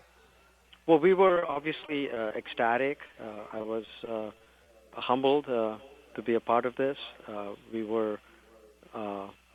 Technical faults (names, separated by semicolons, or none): repeated packet loss (robotic sound); jitter buffer speed-up